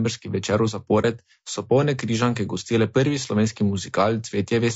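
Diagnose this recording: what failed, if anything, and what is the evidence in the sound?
The speech is rough and grainy for the whole clip. The roughness is plainly audible. Noise fills the gaps between the pitch harmonics, and the top band sounds thin and synthetic. This points to the codec stage, likely low-delay AAC compression of the AAC-ELD kind at around 32 kbps. Its short frames give poor frequency resolution. At this bitrate the encoder cannot hold the harmonic structure cleanly, so quantisation noise spreads between the harmonics.

A brief dip runs from 1.01 to 1.05 s. The sound fades out and back in. This is AAC frame loss with muting, at the network or decoder stage. The gap fits one lost frame, about 30 ms of audio. The decoder set that frame's spectrum to zero. Its overlapping windows then smoothed the edges, which produced a fade rather than a hard cut.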